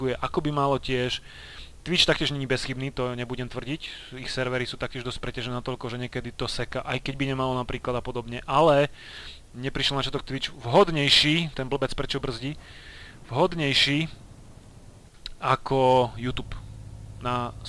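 No technical faults are audible.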